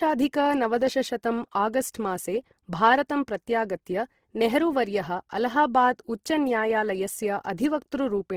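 From start to finish the speech carries plainly audible Opus compression artefacts. Tones in the speech turn grainy and rough rather than swirling, as the encoder keeps each band's energy but fills starved bands by folding or noise instead of leaving gaps. The damage points to a low bitrate, around 16 kbps, likely coded in music (CELT) mode. Bandwidth is not narrowed: content reaches about 20.1 kHz.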